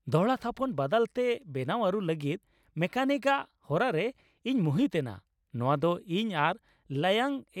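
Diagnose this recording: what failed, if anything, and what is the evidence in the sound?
Nothing failed in this speech recording, and the sound carries no evidence of a fault at any stage.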